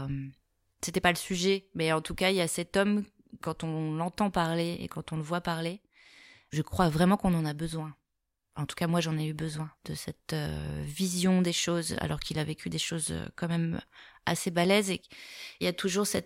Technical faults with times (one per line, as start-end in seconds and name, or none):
none